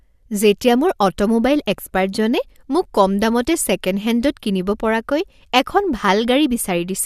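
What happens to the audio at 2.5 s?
At 2.5 s the speech carries on intact, with no dropout, click, distortion or other fault to be heard at that moment.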